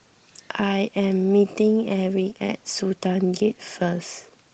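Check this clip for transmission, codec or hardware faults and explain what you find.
Nothing faulty here; the speech shows only the light coding of Opus running in hybrid mode at about 20 kbps, with the full audio band kept.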